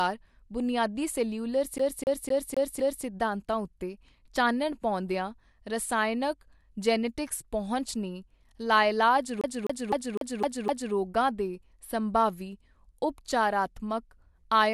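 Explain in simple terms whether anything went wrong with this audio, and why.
The speech gets stuck twice, after "ਬੁਨਿਆਦੀ ਸੈਲਿਊਲਰ" (1.78 to 3.05 s) and after "ਜੀਨੈਟਿਕਸ ਪਹੁੰਚ ਨੇ ਲਾਇਲਾਜ" (9.41 to 10.94 s). This is a CD stuck on one turn. A quarter-second snippet repeats five or six times, like a scratched disc skipping.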